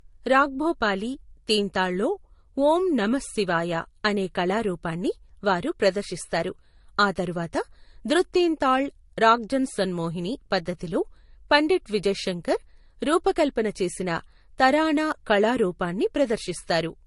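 Throughout, the speech sounds smeared and watery, with nothing above 11.2 kHz; a spectrogram shows a hard ceiling there. This likely reflects transcoding between lossy codecs.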